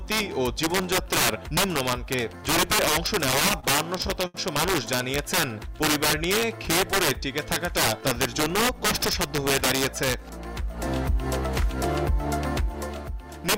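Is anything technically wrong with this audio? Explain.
Yes, there are three faults.

Integer overflow runs throughout. Peaks driven about 11 dB past full scale, a few percent of samples, wrap to the opposite sign, giving violent cracks. The waveform shows full-range vertical flips, and the spectrogram shows broadband streaks.

Repeated stalls (stutter) occur from 3.31 to 4.36 s. The buffer ran dry eight times, and the receiver continued the last sound for 156 ms in total, up to 74 ms at once. The sound drags and stutters, with smeared, repeated frames visible.

A jitter buffer speed-up runs from 8.27 to 10.00 s. About 70 ms of pitch periods were trimmed away, so the sound plays at 104% speed with unchanged pitch. Harmonics stay level while events arrive sooner.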